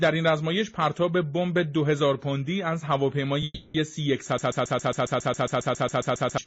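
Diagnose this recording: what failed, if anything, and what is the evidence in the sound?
At 3.44 s the sound stops advancing and is carried on as a fading continuation of its last moment for about 300 ms, ending in a brief dropout of roughly 10 ms before normal audio resumes at 3.76 s. Nothing is skipped. The audio picks up exactly where it stopped, now running about 300 ms later. This is a call audio freeze at the network stage, likely caused by delayed packets draining the jitter buffer so the receiver had to synthesise fill.

From 4.38 s to 6.38 s a single 0.14 s fragment repeats back to back, 15 times, identical on each pass. That regular stutter is a broken-record loop at the playback or stream stage: the source stalled and the last fragment held in its buffer kept being re-sent, likely because the player or encoder stopped receiving fresh data. Whatever should have played during those two seconds is gone, replaced entirely by the repeats.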